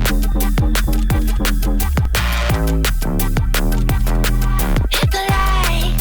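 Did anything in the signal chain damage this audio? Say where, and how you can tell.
Yes. Two low thumps, at 2.05 s and 5.40 s, interrupt the audio without changing the sound around them. Each is a DC step: the waveform's zero line jumps suddenly by about -14 dBFS, then drifts back as a 5 Hz high-pass drains the offset away. This points to the converter or analogue input stage, where a recalibration or an offset input switching in shifts the baseline. The abrupt edge is what you hear as the thump.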